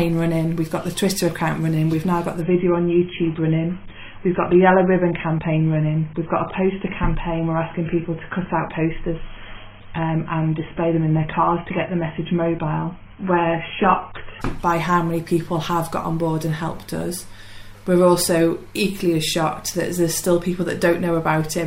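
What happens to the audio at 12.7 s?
At 12.7 s you're in the middle of a stretch where the adaptive stream has dropped to a lower bitrate, running from 2.41 s to 14.41 s. The connection slowed, so the player switched to a much leaner encode. Nothing above about 3.5 kHz survives, so the top end is gone and the sound turns dull and a bit watery, which fits a drop from around 96 kbit/s to something near 16 kbit/s. The switch is abrupt both ways, with no gap.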